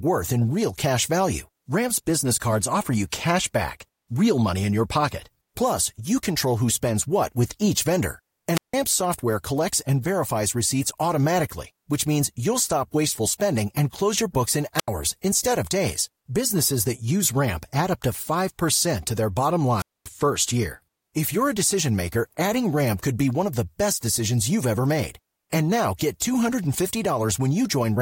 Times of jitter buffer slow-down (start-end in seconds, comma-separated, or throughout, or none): none